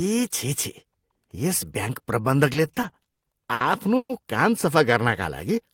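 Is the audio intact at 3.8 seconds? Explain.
No. At 3.8 seconds the speech sits inside a run of repeated stalls (stutter) lasting from 2.53 to 4.12 s. Packets arrived late or slower than playback, so the jitter buffer emptied nine times. Each time the receiver stretched the last sound, fading it over the longer waits, the longest about 130 ms. Roughly 360 ms of filler makes up about 23% of that stretch. Nothing is lost, but the speech drags and stutters.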